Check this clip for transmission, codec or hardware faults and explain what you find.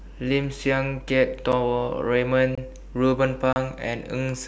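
The speech drops out three times, each a block of digital silence. At 1.52 s an 8 ms gap is heard as a sharp tick, its length fitting a 128-sample buffer. From 2.55 to 2.58 s a 24 ms hole sounds like a pop with a brief void. From 3.53 to 3.56 s a 32 ms hole, fitting a 512-sample buffer, is a short dropout. Each cuts abruptly to silence and back, likely because the output buffer went unfilled in time and was played as zeros.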